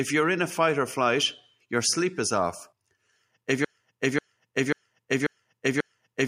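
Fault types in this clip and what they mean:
Broken-record loop: From about 3.65 s to the end of the speech, one fragment of about 540 ms plays five times back to back, each repeat identical and butting straight into the next, so the sound stutters in place instead of moving on. The likely cause is a stalled player, encoder or stream that kept resending the last chunk it held, and whatever should have been heard in that final stretch is lost.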